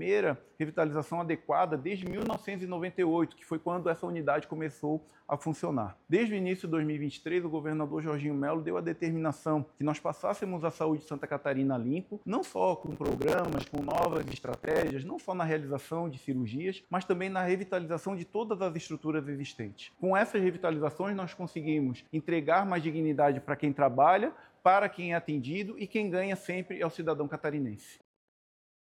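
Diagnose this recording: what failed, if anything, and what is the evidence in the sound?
Processor overload crackle at buffer stage: roughly 10 ms buffers missed deadlines, replaying stale audio, causing gritty crackle at 2.02–2.36 s and 12.81–14.90 s.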